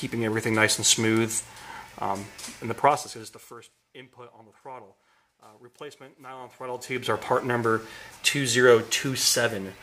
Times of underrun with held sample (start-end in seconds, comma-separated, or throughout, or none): none